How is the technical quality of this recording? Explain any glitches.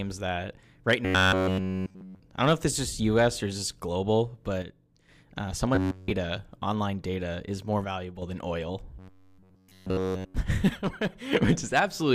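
The recording has two recurring problems: three stretches of robotic buzzing and three brief level dips where one channel vanishes.

The robotic sound from repeated short buffers shows up from 1.05 to 2.20 s, 5.75 to 6.11 s and 8.99 to 10.35 s. The speech turns into a hard, metallic drone pitched at 93.8 Hz, and it only loosely tracks what's being said. This is likely audio arriving too slowly, so the playback side keeps re-looping a tiny slice of about 10.7 ms while the real signal is skipped. During those spans essentially everything you hear is repeated material, and that fixed loop length is what sets the buzz pitch.

The one channel drops out fault hits at 4.62 to 5.09 s, 7.84 to 8.22 s and 10.69 to 11.33 s. Each time the speech suddenly sounds quieter, by about 6 dB, then snaps back. The cause is likely one side of the stereo pair going missing for a moment. When the channels are folded to mono, the material they shared is left at half strength, and anything carried only by the lost side disappears.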